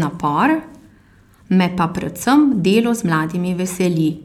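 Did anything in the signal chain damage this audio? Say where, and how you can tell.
No, nothing in the chain audibly damaged this speech.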